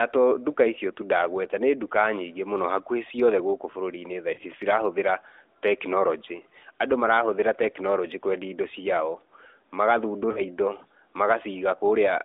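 At 4.34 to 4.41 s and 10.32 to 10.42 s, lost AMR speech frames, about two 20 ms frames each, produce a brief warbling smear rather than a hard silent gap.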